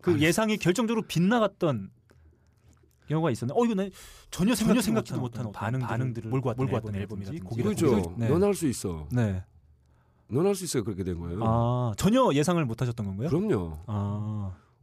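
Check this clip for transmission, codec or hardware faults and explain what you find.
One fault is present. A doubled audio track runs from 4.59 to 8.05 s: a second full-band copy of the speech trails roughly 300 ms behind at about equal level, likely captured again through a slower path. It has no decay or room colour, and it starts and stops abruptly.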